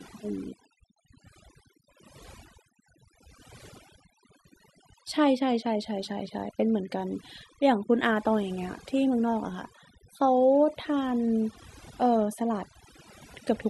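Overdone noise removal runs through the whole clip. A noise reduction stage set far too aggressively cuts individual frequency bands down or out whenever they sit near its noise estimate, taking quieter parts of the speech with them, so gaps fall to near silence with twinkling specks.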